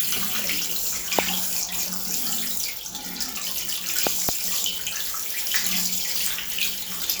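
A loud pop hits at 1.19 to 1.21 s, and a double pop at 4.07 to 4.31 s, both far above the sound. A voltage spike, likely from a switch or static, is the cause.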